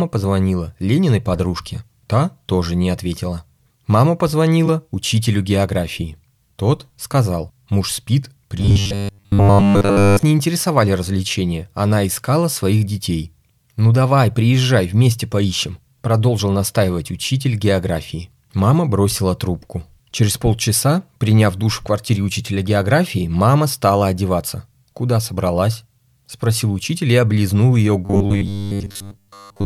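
Speech with robotic sound from repeated short buffers at 8.58–10.23 s, after "сказал муж спит", and 28.05–29.65 s, after "учитель и облизнул ее". A rigid 100 Hz buzz replaces most of the audio, likely from a 10 ms buffer being looped while new data arrived late.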